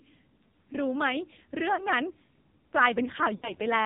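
AMR narrowband mobile codec damage runs through the whole of this speech clip, and it is heavy. The audio is band-limited to 4 kHz because of the 8 kHz sampling. The codec rebuilds the voice from a vocal-tract filter driven by a few sparse pulses, and at this rate the result sounds buzzy and synthetic. The degree of coarseness fits one of the low AMR-NB modes, around 5.9 kbps.

Lost AMR speech frames interrupt it twice. The first, from 1.76 to 1.86 s, is a brief dip and warble, consistent with a single corrupted 20 ms frame. The decoder repeated the last good pitch and filter settings at reduced gain. The second, from 3.36 to 3.55 s, is longer. The sound smears and fades toward silence, which points to a run of about three lost frames, and the voice comes back weak and rough for a moment.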